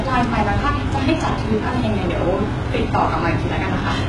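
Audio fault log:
Throughout, HE-AAC compression: the treble sounds synthesised rather than captured, with s sounds coming out gritty and lispy and nothing above 11.4 kHz. That's likely band replication copying the lows upward, and the heavy damage fits a starved bitrate around 12 kbps.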